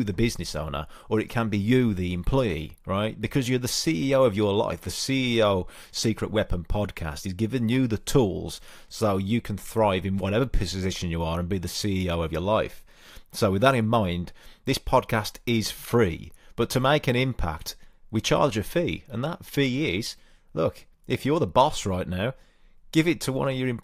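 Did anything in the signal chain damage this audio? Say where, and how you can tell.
No, nothing along the chain left a mark I can hear on this speech recording, so there's no stage to point a finger at.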